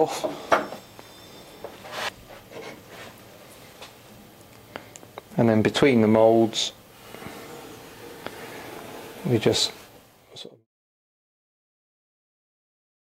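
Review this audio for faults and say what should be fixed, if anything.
Nothing here needs fixing: the signal holds steady and intact, and the level eases down in a smooth fade-out from around 9.5 s to 10.67 s, with no click or hard edge at its end.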